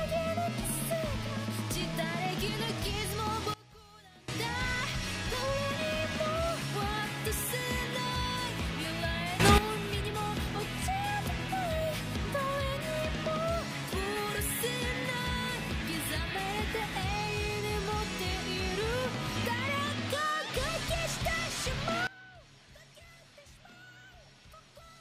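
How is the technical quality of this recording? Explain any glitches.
The recording has three sudden gain jumps, where the level steps abruptly instead of ramping. From 3.54 to 4.28 s, the level drops by about 22 dB. From 9.40 to 9.58 s, it rises by about 12 dB. From 22.07 s to the end, it drops by about 21 dB. The likely cause is a digital gain setting applied from one sample to the next with no fade. Each time, the sound and the background noise jump up or down together.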